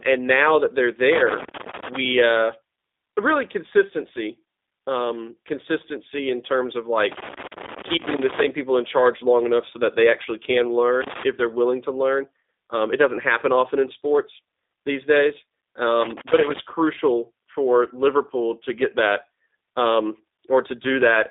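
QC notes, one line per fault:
throughout: G.729 codec. The speech is held to a band of roughly 250 Hz to 3.7 kHz and sounds plainly rough and synthetic, rebuilt from a filter, a pitch predictor and sparse pulses, which fits 8 kbit/s G.729A. Unlike plain band-limiting, the roughness itself is the codec.
1.12–1.96 s, 7.12–8.48 s, 11.01–11.23 s, 16.01–16.59 s: loose connector crackle. Irregular bursts of scratching chop the signal as a contact makes and breaks. They come after "that they're", between "consistency in terms of" and "people in charge long", and just before "crucial for". Unlike clipping, they do not follow the loud peaks.
21.05–21.19 s: hard clipping. Over about 0.14 s the peaks are driven about 1 dB past the limit and cut flat, and the flat tops add a brief crackle on the peaks. Unlike connector crackle, it happens only where the signal is loudest.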